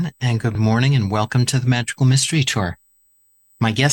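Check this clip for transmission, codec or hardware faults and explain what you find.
There is USB whine running under the speech from start to finish. It is a fixed-pitch tone at 8 kHz, strongest at its 16 kHz multiple and roughly 40 dB below the signal. It comes from the bus drawing current in 125-microsecond microframes, and that current ripple leaks into the audio path through shared power or ground.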